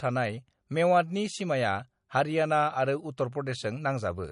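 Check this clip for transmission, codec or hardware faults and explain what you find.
Two faults are audible in this speech clip: codec damage running throughout, and three isolated clicks.

MP3 compression, throughout the clip: the sound has a plainly audible watery, swirly quality, with metallic chirps on sibilants. The likely cause is a low-bitrate MP3 encode, around 40 kbps. At that rate the encoder cuts the treble and lets weak frequency components flicker on and off between frames.

Dropped samples at 1.24 s, at 2.32 s just after "मेवातनि सीमाया", and at 3.21 s: each is a single sharp click, heard as a thin vertical line across the spectrum. A tiny fraction of a millisecond is likely missing each time, so the waveform jumps abruptly to a later value.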